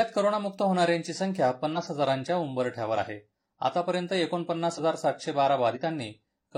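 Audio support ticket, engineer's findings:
Compressed frames skipped, speech track. Jumps at 1.68–1.78, 2.93–2.98, 4.74–4.79 and 5.72–5.78 s. Each drops about 50 ms of audio. Probable component: decoder or file. Missing or rejected frames. Playback jumps ahead, leaving a short join artefact.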